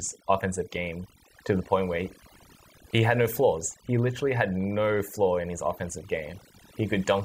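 Throughout, the speech sits over near-silent background with twinkling specks: overdone noise removal, with bands near the noise estimate suppressed, taking quiet vocal detail too.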